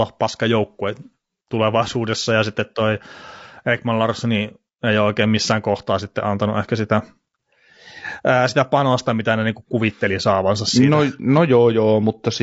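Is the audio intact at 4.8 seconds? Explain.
No. At 4.8 seconds, as throughout the clip, the speech carries damage from low-delay AAC compression, likely AAC-ELD of the kind used in video calls. Its short frames resolve pitch harmonics poorly and spend bits fast, so at a rate that sounds like roughly 32 kbps the encoder runs short. The voice comes out rough and grainy, with noise filling the gaps between harmonics and a dulled, synthetic-sounding top band. The damage is plainly audible.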